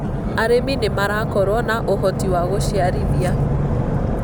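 No technical faults can be heard in this speech recording.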